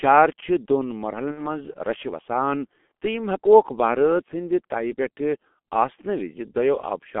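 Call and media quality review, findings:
G.723.1 codec, whole clip. Muffled, hoarse speech. Nothing above 3.4 kHz, thin below 200 Hz. Heavily smeared consonants. The low-rate 30 ms frame coding is too coarse for fast transitions. The damage fits the 6.3 kbit/s mode.

VoIP packet loss concealed by the speech codec, 1.32 to 1.52 s. About 60 ms of audio missing, which fits two lost 30 ms frames. The decoder repeats its last pitch and filter, so the speech turns into a buzzy tone or coloured noise and fades. It stays weak or distorted after packets resume.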